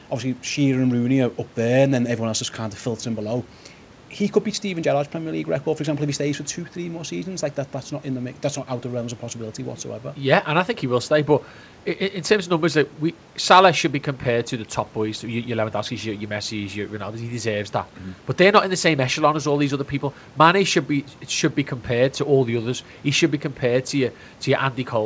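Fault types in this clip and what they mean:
No faults can be heard anywhere in the recording. The speech has passed through a G.722 call codec, which fits 64 kbps and leaves nothing above 8 kHz, and faint room noise sits about 28 dB below the speech.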